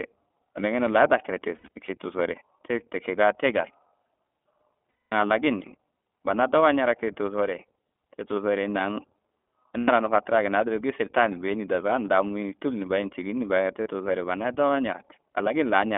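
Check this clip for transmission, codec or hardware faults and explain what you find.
The speech shows two faults: iLBC codec coding throughout and four bursts of lost iLBC frames.

iLBC codec damage is plainly audible for the whole clip. The band runs from about 250 Hz to 3.5 kHz, and each frame's excitation is coded independently, which fits 20 ms frames at 15.2 kbps. This leaves the speech clear but slightly rough and synthetic.

Lost iLBC frames occur at 1.56–1.90 s, 4.91–5.13 s, 9.78–9.90 s and 13.82–13.89 s. The first burst loses 160 ms of audio, scattered, with runs up to about 70 ms. The others lose 220, 100 and 40 ms. The decoder repeats the last pitch cycle with noise, producing a held buzzy vowel, and the speech recovers immediately after.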